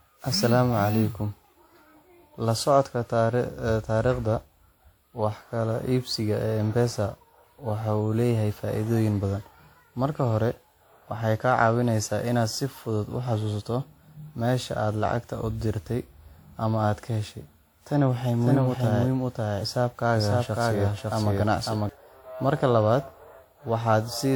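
Throughout, the speech sounds swirly and hollow with blurred attacks, likely generation loss from repeated WMA re-encoding; the spectrogram shows smeared, holed bands cutting off near 20.1 kHz.

From 18.41 to 21.89 s, a doubled audio track appears: an equally loud copy about half a second late, likely, showing as duplicated waveform bursts that start and stop abruptly.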